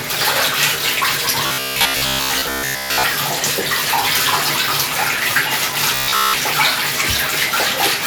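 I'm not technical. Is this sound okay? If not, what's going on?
No. The audio has robotic sound from repeated short buffers, from 1.46 to 3.07 s and again from 5.95 to 6.40 s. The likely cause is fresh audio arriving too slowly, so the playback software kept replaying the last tiny slice, about 15 ms long, in place of most of the real sound. Replaying the same slice over and over creates a steady, metallic buzz at 66.7 Hz that sits on top of the sound during those stretches.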